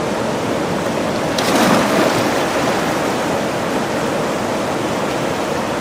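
No technical faults are audible anywhere in the clip. Nothing in the sound needs flagging.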